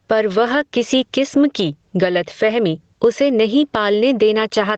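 Right through the speech there's gain pumping: the level swings by around ten decibels, pulled down the moment a loud syllable hits. It's likely mic gain set way too high with a fast limiter clamping down, leaving everything squashed. The top end stops near 8 kHz, as a call path does.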